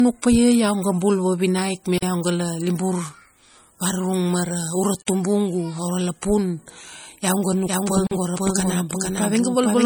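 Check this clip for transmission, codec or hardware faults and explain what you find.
Three faults are present: re-encoded low-bitrate audio, gaps between chunks, and a doubled audio track.

Low-bitrate audio saved at a high bitrate runs throughout. The speech carries swirly MP3 artefacts. This likely comes from a 48 kbit/s MP3 re-encoded at a much higher bitrate.

Gaps between chunks occur at 1.98, 5.02 and 8.07 s. Each is a 44 ms hole. They recur every 3 s, at the joins between chunks.

A doubled audio track starts abruptly at 7.67 s and lasts to the end. A copy at roughly equal level trails by about half a second, with no room colour.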